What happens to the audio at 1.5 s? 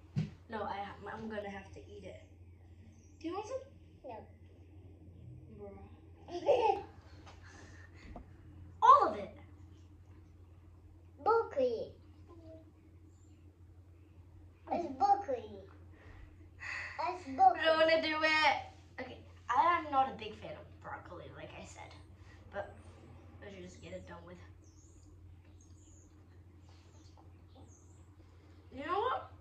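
One channel arrives a fraction of a millisecond late and is summed to mono, causing channel delay (comb filtering) from 1.42 to 6.76 s. Shared content cancels at evenly spaced frequencies, the first near 1.5 kHz, so the sound turns hollow and phasey.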